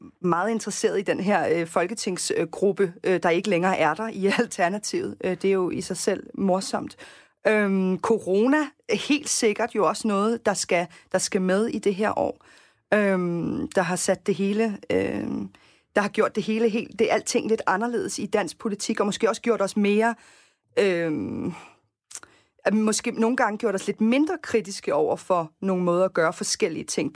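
Listening closely to the speech from beginning to end, nothing stood out as a technical problem at any point.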